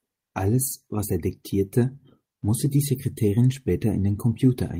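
Nothing in this speech recording points to a technical fault. There are no events to place on a timeline and nothing to trace to a cause.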